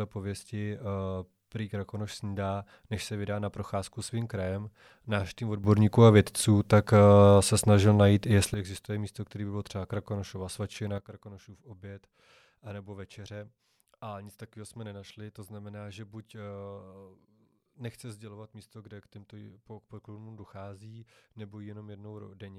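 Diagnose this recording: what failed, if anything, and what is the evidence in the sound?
Sudden gain jump. Speech and noise rise about 11 dB from 5.64 to 8.54 s, then drop about 11 dB from 10.98 s. Likely unramped digital gain changes.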